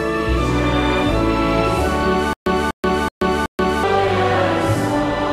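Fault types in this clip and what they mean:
Stutter with silent gaps: between 2.33 and 3.84 s the same 245 ms burst of sound plays four times, each followed by about 131 ms of dead silence, so it repeats every 376 ms at a steady pace. This is likely a stalled player or stream replaying its last fragment at each retry, and whatever should have sounded in that span is lost. A waveform shows identical blocks separated by flat silent stretches, and a spectrogram shows repeated copies of one pattern with black gaps between.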